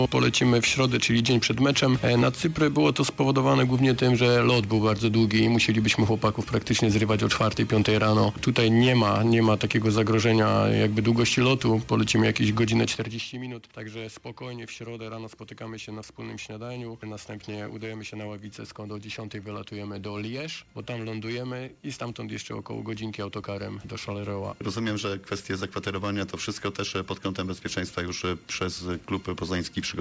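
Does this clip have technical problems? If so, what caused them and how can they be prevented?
Yes, there is gain pumping throughout the clip. The likely cause is input gain set far too high for the microphone, so a fast limiter or compressor clamps down on every loud sound and lets go in the gaps. The gain swings by around 10 dB, which squashes loud and soft parts together. To prevent it, lower the microphone gain until peaks stop driving the limiter.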